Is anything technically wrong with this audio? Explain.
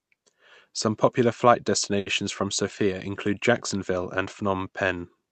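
Yes. Just after "popular flight", at about 1.99 to 2.08 s, there is a short stall from a late packet. A packet arrived late, so the jitter buffer ran dry and the receiver stretched the last sound for about 70 ms, then resumed from the same point. Unlike a dropout, no speech is skipped; the sound is simply held too long, with a faint buzz or dip.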